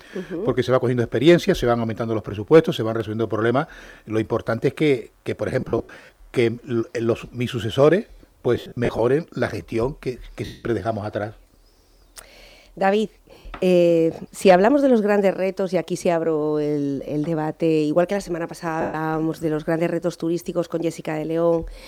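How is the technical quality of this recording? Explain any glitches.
The recording has a recurring dropout fault: lost LE Audio frames at 5.61–6.09 s, 8.55–8.99 s, 10.45–10.64 s, 13.38–13.45 s and 18.81–18.94 s. Portions of the Bluetooth LE Audio stream never arrived, and the LC3 decoder filled each gap by repeating the last spectrum with randomised signs. Tonal content therefore smears into a brief noisy wash. The losses total 70 to 270 ms per event, with the gaps' spacing fitting 10 ms frames. The first two are scattered over about half a second, with the longest unbroken runs around 70 ms. The light lossy compression is barely audible.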